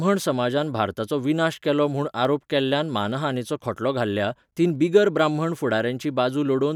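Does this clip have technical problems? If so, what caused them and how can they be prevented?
Yes. Three sharp clicks at 2.25 s (after "भारताचो विनाश केलो म्हूण"), 3.18 s (before "खटलो घाल्ल्या तीन बिगर") and 4.75 s (between "खटलो घाल्ल्या तीन" and "बिगर ब्राह्मण") are likely dropped samples. A tiny fraction of a millisecond goes missing each time, so the waveform jumps abruptly and a thin vertical line crosses the spectrogram. Larger audio buffers and a less loaded recording system prevent this.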